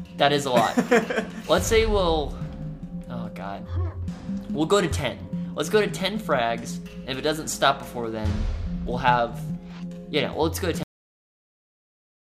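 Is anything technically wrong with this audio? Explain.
Yes, there is a cut-off end. At 10.83 s the sound stops abruptly mid-event and drops straight to silence with no natural decay, staying silent for the remaining 1.5 s or so. The final buffers were never written or played back, so the audio simply ends where the data ran out.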